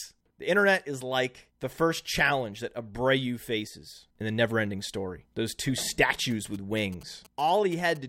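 From 6.31 to 7.97 s, GSM signalling bursts break in: a nearby 2G phone's radio pulses, rectified by the audio circuitry, give a galloping dit-dit-dit of short 217 Hz buzzes about 25 dB below the speech. Unlike steady mains hum, it stutters in groups.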